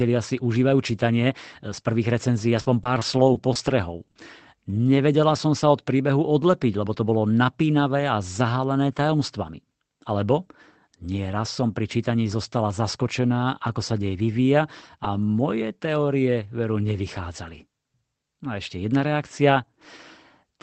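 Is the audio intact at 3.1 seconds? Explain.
No. Repeated packet loss (robotic sound) runs from 2.57 to 4.19 s, just after "e z prvých recenzií". Short gaps of up to 40 ms recur, each patched by extending the preceding sound, so speech turns choppy with pieces missing.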